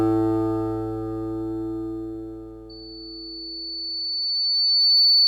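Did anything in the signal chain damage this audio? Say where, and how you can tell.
Yes. Loudspeaker feedback squeal from the acoustic path between playback and capture: the microphone is picking up the loudspeaker it drives, and around 4.5 kHz the loop gain climbs above unity. From 2.69 s a single tone at that frequency emerges and swells over roughly two seconds, settling at about 10 dB above the rest of the sound and persisting until the clip ends at 5.27 s, since nothing breaks the loop.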